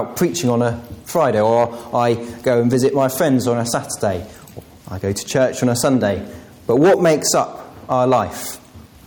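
Gain pumping runs through the whole clip. The input gain was likely set far too high for the microphone, so a fast limiter or compressor keeps pulling the level down whenever anything loud arrives. The level swings by around 10 dB. Loud and quiet passages sit unnaturally close together, and the sound is squashed and breathing.

Hard clipping appears in six places, where peaks exceed what a stage in the chain can pass and are sliced flat. The flat tops add harsh upper harmonics. The first two bursts run from 1.20 to 2.10 s, overdriven by about 4 dB, and from 2.49 to 3.35 s, by about 3 dB. Brief crackles follow at 5.38 to 5.44 s (about 2 dB) and 5.84 to 5.96 s (about 4 dB). The worst stretch is 6.71 to 7.42 s, about 10 dB over, which turns into a harsh fuzz. A last burst at 7.98 to 8.21 s is about 5 dB over.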